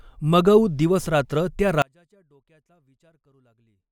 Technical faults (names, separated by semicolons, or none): audio dropout to a faint residue